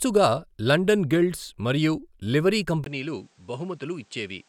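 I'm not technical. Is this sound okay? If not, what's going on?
No. At 2.84 s, right after "లండన్ గిల్డ్స్ మరియు లివరీ", a tiny gap is followed by duller, slightly quieter speech with new faint background noise until the end. The input likely switched to a poorer device. Unlike a simple tone change, everything changes at once.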